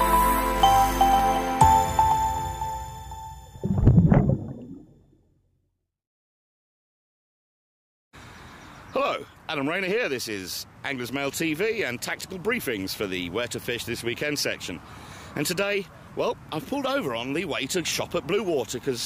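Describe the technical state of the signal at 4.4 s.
At 4.4 s the signal is intact, with no dropout, distortion or other technical fault audible at that moment.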